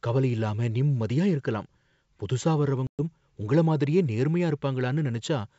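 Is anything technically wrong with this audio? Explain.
Yes. There is packet loss on an ADPCM call from 2.87 to 3.00 s, where about 120 ms of speech drops to hard-edged silence, which suggests roughly ten short packets went missing. The decoder's adaptive predictor and step size lose track of the sender's, so the speech comes back with brief, slight distortion. On a waveform this appears as a flat gap with abrupt walls. On a spectrogram it is a blank vertical band. The wideband G.722 coding at 64 kbit/s keeps the speech clear up to about 7 kHz.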